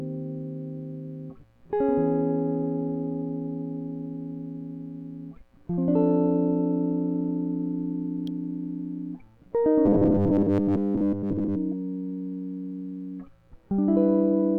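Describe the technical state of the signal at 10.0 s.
At 10.0 s the music has turned into robotic sound from repeated short buffers. The fault runs from 9.86 s to 11.57 s. Audio is likely arriving too seldom, so the playback fills the gaps by looping a tiny 10 ms slice while fresh material is skipped. Around two thirds or more of the span is this repetition. The looping stamps a fixed 100 Hz pitch onto the sound, giving a stiff metallic buzz that only loosely tracks the music.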